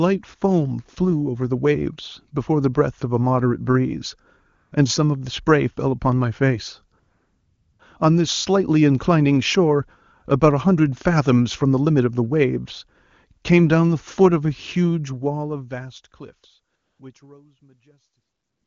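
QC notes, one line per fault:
4.55–4.71 s, 6.99–7.79 s, 16.75–16.99 s and 18.21–18.67 s, AMR comfort noise: the phone judged the talker silent and stopped sending speech frames for 160, 800, 240 and about 460 ms, so the receiver substituted smooth synthetic noise that switches in and out, with the last gap running into the fade-out.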